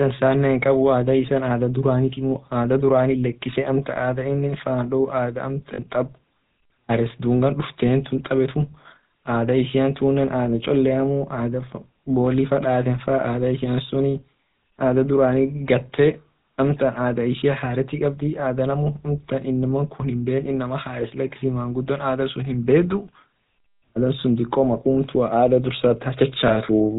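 From the start of the clip to its end, the speech carries the plainly audible buzzy, gravelly roughness of the GSM full-rate codec, consistent with its 13 kbps mode. The codec rebuilds each voice from a vocal-tract model fed by a sparse, regularly pulsed excitation, so fine detail is replaced by a rasping texture. On a spectrogram, energy stops sharply at 4 kHz, and the harmonics look smeared and grainy rather than cleanly striated.

At 5.74 to 5.79 s comes the first instance of lost GSM frames, a gap of about 40 ms that fits two missing 20 ms frames. The decoder reuses the last good frame's settings, so the sound briefly freezes into a rough, metallic ring. A second, shorter dropout falls between 26.48 and 26.58 s. On a spectrogram each shows as a short block of repeated, flat spectral bands that do not follow the speech.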